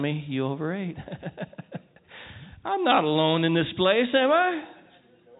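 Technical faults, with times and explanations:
No technical faults can be heard in this speech.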